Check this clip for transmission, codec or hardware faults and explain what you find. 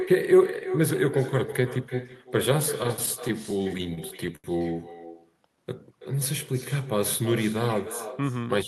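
Four faults are present: an echo throughout, plus stuttering, a slow-down and a speed-up at specific points.

Echo with no canceller, whole clip: the far end's loudspeaker feeds its microphone uncancelled, returning the speech about 12 dB quieter, roughly 300 ms later, as a thin shadow.

Repeated stalls (stutter), 2.83 to 4.47 s: the jitter buffer ran empty sixteen times, and the receiver stretched the last sound each time, 229 ms in total, longest 80 ms. Nothing is lost, but the speech drags and stutters.

Jitter buffer slow-down, 5.06 to 5.63 s: to rebuild its reserve, the receiver repeated pitch periods, adding 82 ms. The speech plays at 87% speed at unchanged pitch, sounding drawn out.

Jitter buffer speed-up, 7.57 to 8.59 s: to shed excess buffered delay, the receiver cut short pitch-period slices, about 70 ms in total. Speech runs at 107% speed at the same pitch, sounding hurried.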